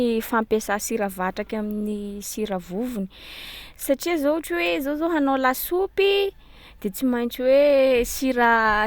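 A short speech recording, and there's nothing technically wrong to flag anywhere in it.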